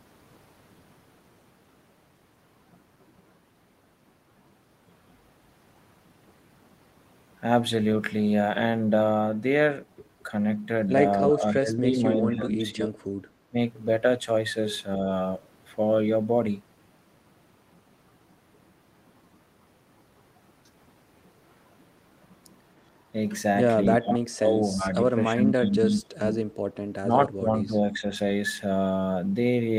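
A speech recording in which the talker's level repeatedly sinks and breaks up: from 11.24 to 12.99 s, briefly at 13.49 to 13.55 s, from 24.0 to 26.31 s, and from 27.01 to 28.05 s, the deepest dip roughly 30 dB, around 24 to 26 s. This is likely speech suppressed in double talk, an echo canceller mistaking overlapping far-end and near-end speech for echo and attenuating both.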